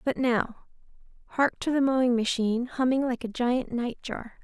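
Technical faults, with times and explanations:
No technical faults are audible anywhere in this speech recording.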